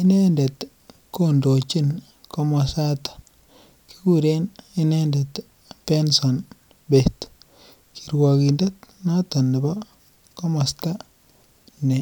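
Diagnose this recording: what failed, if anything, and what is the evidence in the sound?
Nothing in this speech recording points to a failure at any stage of the chain. No event in the sound marks a point where something went wrong.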